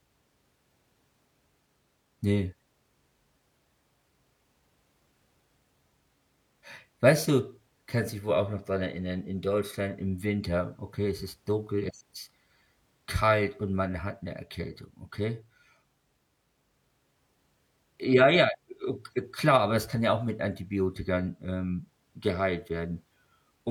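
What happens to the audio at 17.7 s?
Nothing goes wrong at 17.7 s: the speech carries on cleanly through that moment, with no dropout, click, distortion or other fault to be heard.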